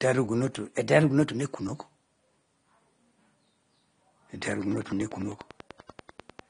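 Throughout the speech, AAC compression damage is plainly audible: a dull, smeared tone with a warbly fizz on sibilants, consistent with AAC-LC at a low bitrate, likely around 32 kbps. A spectrogram shows a hard ceiling at 9.7 kHz.

From 0.78 to 1.45 s, a drift correction step shifts playback about 5.7% faster and pitch up by roughly 96 cents, nearly a semitone. This is likely a clock-matching routine adjusting its buffer. On a spectrogram the harmonics jump upward for that span.

From 4.42 to 6.40 s, a train of clicks ticks regularly at 10.1 per second, around twenty in all, peaking about 5 dB above the speech. Likely cause is interference or a faulty connection or power supply. The waveform shows evenly spaced sharp spikes, and the spectrogram shows thin vertical broadband lines.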